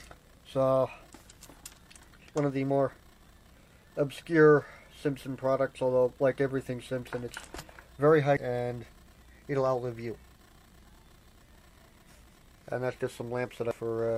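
At 8.37 s there is a brief disturbance from damaged data in a compressed stream. Part of the encoded file is wrong at that point. The decoder misreads or rejects the affected frame, loses sync and hunts for the next valid frame header. The result is a chirp, squawk, click or short break in the sound. A second event runs from 13.71 to 13.74 s, lasting about 32 ms. It has the same cause.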